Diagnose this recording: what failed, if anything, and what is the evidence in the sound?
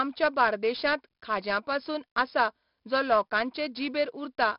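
The codec stage failed: the whole recording carries heavy 4-bit ADPCM compression damage. A gritty hiss rides on every loud syllable and drops away in the pauses, and sharp onsets smear into distortion because the adaptive step cannot grow fast enough to follow them. Nothing is present above 5.3 kHz, which fits a low sample rate and a stream of about 44 kbps. Unlike a steady analogue noise floor, this grain tracks the signal level. Unlike a perceptual codec, it has no warbling or swirling artefacts.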